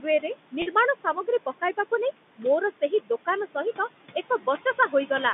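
A short speech recording over a telephone line, with noise suppressor artifacts throughout: the suppressor pulls down whatever bands it judges to be steady room noise, by about 17 dB, frame by frame. The background therefore drops away in the gaps between words and swells back underneath them. That pumping, and not a constant hiss, is what separates it from plain room noise, which sits steadily about 15 dB below the speech. In four places the suppressor also mistakes speech for noise: 0.01 to 0.35 s, 0.95 to 1.28 s, 2.71 to 2.92 s and 4.64 to 4.93 s. Within each span, a total of about a tenth of a second, or a little more at 2.71 s, is turned down by up to about 9 to 10 dB. This speech cut by the noise suppressor makes parts of the speech sound swallowed or faint. Unlike a dropout, the sound thins rather than vanishing abruptly. Between 0.62 and 0.66 s, packet loss with pitch repetition covers a 40 ms gap, which fits two lost 20 ms packets. 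The receiver repeats the last pitch period, so instead of silence or a click there is a brief held, buzzy tone that fades before normal speech resumes. The 150 Hz to 3.6 kHz band-limiting of the G.711 mu-law line is part of the telephone channel, not a fault.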